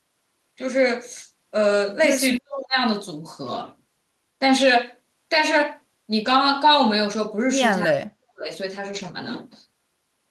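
Speech suppressed in double talk cuts into this speech recording from 2.38 to 2.78 s and again from 7.86 to 8.5 s. The talker's level plunges by about 40 dB for roughly 0.4 s and then most of a second. This is likely an echo canceller that heard both ends active at once, could not tell the near talker from the returning loudspeaker echo, and ducked everything together. A lost packet rebuilt from error correction appears at 6.25 to 6.35 s and at 8.91 to 9.13 s. The audio keeps flowing with no gap, but about 60 ms and then 120 ms of speech turn rougher and noisier. Each dropped stretch was replaced by the lower-bitrate backup copy carried in the following packet, which points to separate packets lost each time, three and then six.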